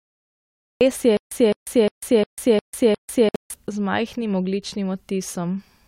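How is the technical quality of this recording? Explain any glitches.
The recording has three clear technical faults, all in its first 3.5 seconds.

Cut-off start: the file sits in digital silence until 0.81 s, then speech begins abruptly mid-sound, with no attack. The recording or stream evidently began late.

Stutter with silent gaps: from 1.17 to 3.54 s, a 211 ms fragment repeats six times, each followed by 144 ms of silence, a steady 355 ms cycle. This is likely a stalling player replaying its last buffer, with the intended audio lost.

Gap at a join of encoded pieces: at 3.29 s a 57 ms silence opens with smeared edges, and the sound then continues where it stopped. Separately encoded segments were joined with their encoder delay and padding left in.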